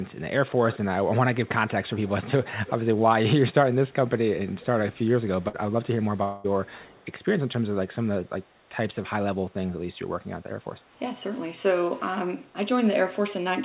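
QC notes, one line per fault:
0.72–0.78 s, 1.96–2.11 s, 2.66–2.71 s, 4.52–4.66 s, 6.66–7.06 s, echo leak: faint delayed copies of the sound trail the original by about 218 ms. They are strongest near 0.7 s and 2.7 s, at about -15 dB relative to the speech, and weakest by 6.7 s, at about -30 dB. This is likely a far-end loudspeaker whose echo canceller let residue through. On a spectrogram, weak duplicates of the preceding harmonic patterns appear shifted right by about 0.22 s. On a waveform, small low-level ripples ride on the tails of louder segments.
5.48–5.555 s, burst of packet loss: about 60 ms of audio never arrived. The receiver covered roughly 55 ms of that by extending the last sound and fading it, so a short held buzz or fading hiss replaces the lost material before the audio resumes slightly further on. On a spectrogram, frozen spectral content fades out and then gives way to an abrupt restart. 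On a waveform, a repeated segment decays in amplitude and is followed by a discontinuity.
6.235–6.46 s, long network dropout: about 200 ms went missing. Concealment filled all of it with a stretched, fading continuation of the last sound, so no true silence appears, only a smeared buzz or hiss that dies away before the audio returns further on. This is likely a brief network stall. On a spectrogram, static or blurred bands thin out over about 0.2 s. On a waveform, a repetitive decaying envelope ends in a hard resumption. Everything sits below 4 kHz, consistent with a 64 kbps G.711 mu-law call path.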